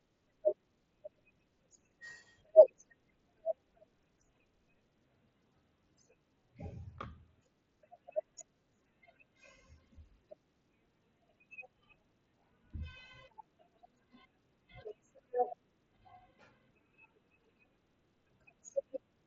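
No technical faults are audible in this speech; it has passed through a Bluetooth mSBC headset link, which shows as a wideband ceiling with nothing above about 7.7 kHz, consistent with that codec running at around 61 kbps.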